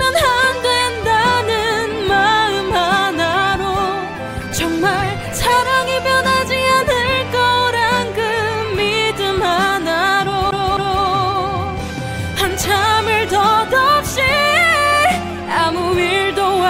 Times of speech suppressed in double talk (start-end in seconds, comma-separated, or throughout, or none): none